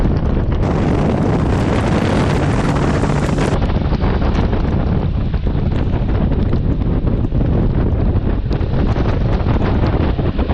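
Audio read two samples at a time (double speed), 0.63 to 3.54 s: sample pairs are taken as single frames, so sound runs twice as fast, an octave higher.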